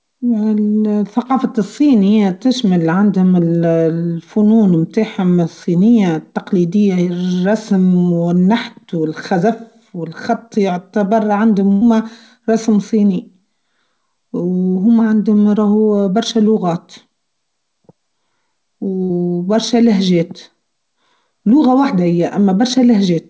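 At 11.72 s, right after "و الخط يعتبر عندهم", the speech freezes into a held, fading sound for about 0.1 s, and again at 19.03 s, just before "برشا لهجات", for about 60 ms. Each is a burst of packet loss: the receiver stretched the last sound, then skipped the missing stretch.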